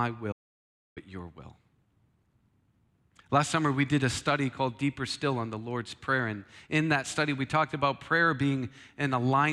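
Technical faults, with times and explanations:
0.33–0.97 s, audio dropout to silence: the speech drops to silence for 0.64 s, with no room tone, resuming at "your will"; likely a lost input.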